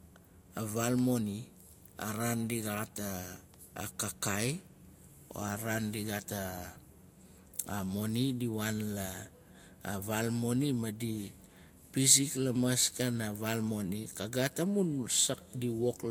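Throughout the speech, nothing is present above 16.6 kHz, and the highs carry the smeared texture of a low-bitrate encode. This is likely low-bitrate audio saved at a high bitrate: the damage fits an earlier encode near 50 kbit/s that the later MP3 cannot undo.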